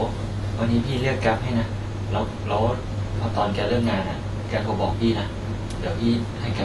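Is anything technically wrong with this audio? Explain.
Yes. Throughout the clip, the speech carries plainly audible AAC compression. Nothing sounds above about 11.5 kHz, so the top end is dull and airless. Sibilants turn fizzy and smeared. Sustained sounds take on a watery warble. This is likely low-bitrate AAC-LC, which fits a rate near 32 kbps. At that rate the encoder spends few bits per frame. It trims the high band and leaves gaps in the spectrum.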